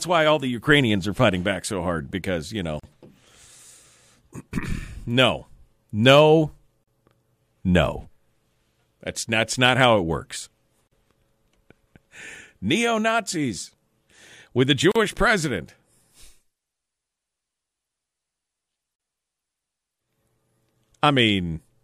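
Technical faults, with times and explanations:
2.80, 6.84, 10.88, 14.92 and 18.96 s, gap at a join of encoded pieces: untrimmed encoder delay and padding leave a 40 ms gap every 4.0 s, interrupting the speech.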